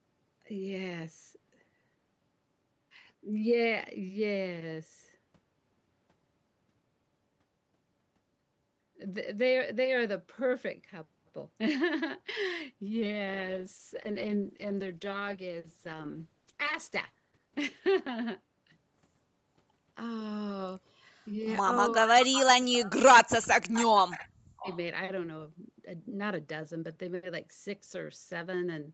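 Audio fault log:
12.96–19.77 s, call bitrate drop: The speech turns coarse and watery as the encoder is pushed from 32 kbps down to 9 kbps, bottoming out for about 3.75 s before climbing back. With so few bits per frame, Opus quantises the spectrum crudely, smearing consonants and leaving a gurgling texture. At the lowest rate it also narrows the band below the 8 kHz ceiling heard elsewhere, so the sound goes dull and muffled until the bitrate recovers.
22.02–22.97 s and 23.13–24.68 s, speech suppressed in double talk: The speech drops sharply, by roughly 40 dB at its deepest, losing about 0.7 s in the first stretch and about 1 s in the second. The likely cause is both sides talking at once. The echo canceller could not tell the near talker from loudspeaker echo, so it clamped down on everything it picked up.
22.34 s, 23.42 s, 23.75 s, 24.1 s and 24.59–24.78 s, echo leak: Brief scraps of the speech return about 0.52 s after the original, sitting roughly 15 to 30 dB below it. 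The likely cause is a loudspeaker on one side feeding its microphone, with the echo canceller letting residual pieces of that pickup through and sending them back down the call.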